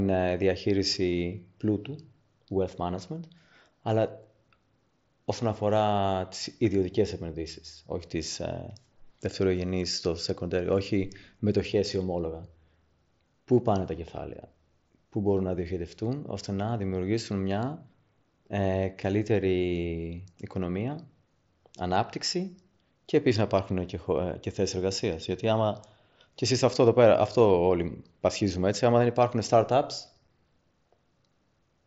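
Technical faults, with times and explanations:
30.27 s, unconcealed Bluetooth headset packet loss: a gap of about 7.5 ms drops out abruptly in the wideband mSBC speech, which fits a single lost packet replaced by silence. It sounds like a tiny, abrupt hole in the speech. A waveform shows a flat notch with sharp edges, and a spectrogram shows a thin vertical blank stripe.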